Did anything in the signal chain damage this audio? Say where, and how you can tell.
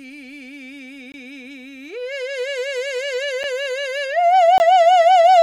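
Yes. The damage points to the driver or buffer stage: the music drops into three blocks of digital silence, at 1.12–1.14 s and 4.58–4.60 s (20 ms each) and at 3.43 s (about 7.5 ms). Each one cuts to zero and back with no fade, and the longer two are heard as short holes. The waveform shows flat zero-line gaps with abrupt edges, and the spectrogram shows thin blank vertical stripes. The output buffer was likely not refilled in time.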